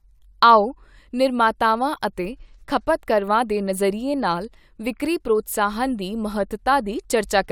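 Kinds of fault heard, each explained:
No fault of any kind turns up anywhere in this speech clip, so there's nothing here to list or explain.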